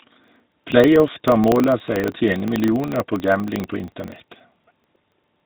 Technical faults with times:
0.00-5.46 GSM full-rate codec
0.00-5.46 filter restarted on every block

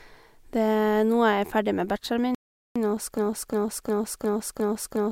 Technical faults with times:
2.35-2.76 rebuffering stall
3.17-5.12 broken-record loop

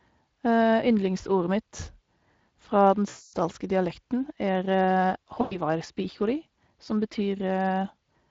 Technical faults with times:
0.00-8.31 Speex codec
3.09-3.35 VoIP packet loss concealed by the speech codec
5.41-5.58 VoIP packet loss concealed by the speech codec

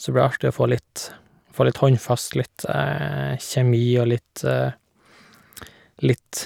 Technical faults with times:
none

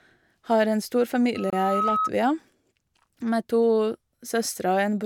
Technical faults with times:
1.35-2.10 loudspeaker feedback squeal
1.50-1.53 Bluetooth stall

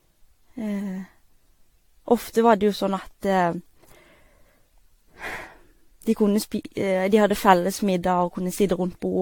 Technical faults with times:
0.00-9.22 generation loss

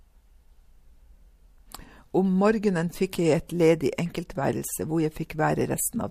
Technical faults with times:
3.47 pre-echo

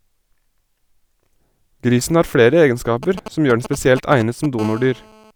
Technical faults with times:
3.03-4.61 GSM signalling bursts
4.61-5.31 GSM phone buzz

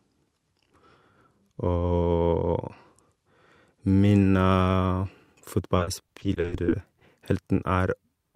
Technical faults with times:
5.77-7.02 repeated packet loss (robotic sound)

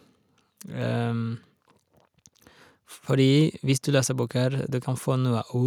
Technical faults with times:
none

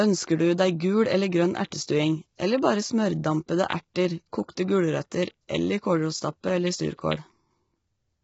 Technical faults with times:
0.00-8.24 low-delay AAC compression

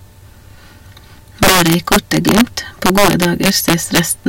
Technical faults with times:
1.43-2.41 integer overflow
2.86-3.99 integer overflow

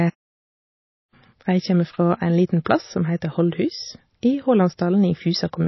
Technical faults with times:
0.00-5.67 MP3 compression
2.65 pre-echo

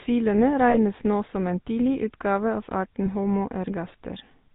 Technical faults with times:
0.00-4.55 GSM full-rate codec
0.70-0.77 lost GSM frames
3.04-3.07 lost GSM frames

